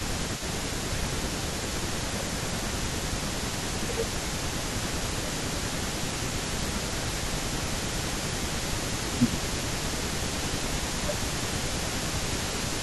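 From the start, an echo leak runs through the whole clip. A delayed copy of the speech trails by 329 ms, about 15 dB down. A loudspeaker-side echo canceller likely failed to remove it.

Speech suppressed in double talk also runs through the clip, in spans at 0.07–3.2, 3.79–5.64, 5.98–6.39, 6.55–8.51, 8.76–9.76, 10.33–12.06 and 12.27–12.54 s. The speech dips by up to about 15 dB, and by about 10 dB in the last span. The canceller likely ducked the talker while the other side spoke.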